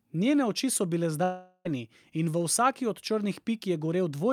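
Speech, with a long network dropout from 1.23 to 1.67 s. It falls between "oči so bile" and "in v vsaki od". The audio stops making sense there. The receiver stretches the last sound into a buzzy, fading hiss for about 0.42 s, and no true silence appears. When the speech resumes, roughly 0.42 s of it is simply gone. The likely cause is a stall in packet delivery, with concealment covering the gap.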